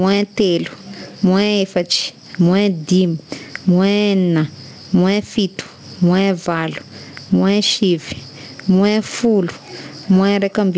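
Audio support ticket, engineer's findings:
Gain pumping throughout: loud and soft parts pulled closer in level, sound squashed, around 15 dB. Likely excess mic gain into fast limiter; a gate would cut gaps.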